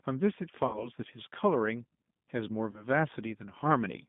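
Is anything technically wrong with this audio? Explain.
Yes. The G.729 codec damage runs through the whole speech clip. The line is confined to roughly 150 Hz to 3.6 kHz, and the speech is rebuilt from a vocal tract filter, a pitch predictor and a handful of pulses per frame rather than from the waveform itself. The result is plainly rough and slightly synthetic. That character fits an 8 kbit/s G.729A-type encoding.

VoIP packet loss concealed by the speech codec occurs from 0.67 to 0.88 s and again from 2.71 to 2.87 s. In each case audio went missing, and the decoder filled the gap by repeating its last pitch and filter settings at falling gain. The speech smears into a buzzy tone or coloured noise that fades. The first gap is longer, consistent with about 60 ms lost, or two packets. The second suggests about 30 ms, or one packet. The audio stays weak and distorted briefly after each gap while the decoder recovers.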